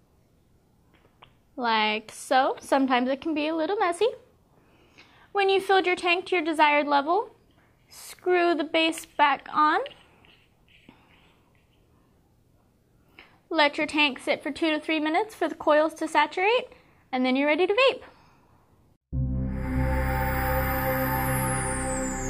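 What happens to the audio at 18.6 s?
Nothing goes wrong at 18.6 s; the audio there plays through intact, with no dropout, click, distortion or other fault.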